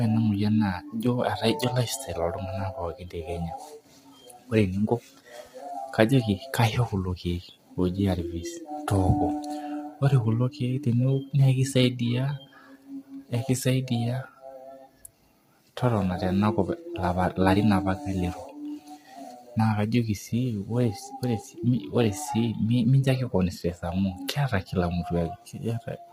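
From start to end, the speech sounds rough and grainy. Noise fills the gaps between harmonics, and the top band sounds thin and synthetic. This is likely low-delay AAC compression. Short frames blur pitch detail, and the heavy damage fits a bitrate around 24 kbps.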